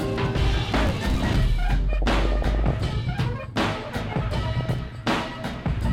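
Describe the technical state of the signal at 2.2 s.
At 2.2 s the music is in the middle of DAB burbling, from 1.93 to 2.93 s. Bit errors at a rate of under one percent slip past error correction. Corrupted samples put short blips of noise in single sub-bands and corrupted scale factors make sub-bands jump in level, giving a burbling sound.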